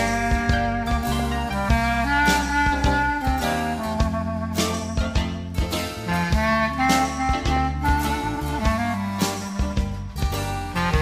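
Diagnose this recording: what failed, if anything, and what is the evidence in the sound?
DAB burbling at 1.19 to 1.32 s and again briefly at 7.56 s. The fault sits at reception into the MP2 decoder. With bit errors around a tenth of a percent, some slip past error correction and corrupt sub-band samples, so single sub-bands get short blips of noise.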